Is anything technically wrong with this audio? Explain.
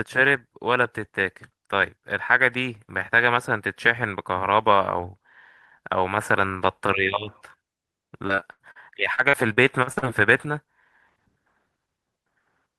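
Yes. The speech shows repeated packet loss (robotic sound) in two stretches, 8.27 to 8.77 s and 9.15 to 10.04 s. Audio data arrived late or not at all several times in quick succession, and each hole was bridged by extending the preceding sound. About a third of the first stretch and a quarter of the second is concealed, with holes up to 80 ms and 40 ms long. The result is choppy speech with fragments missing.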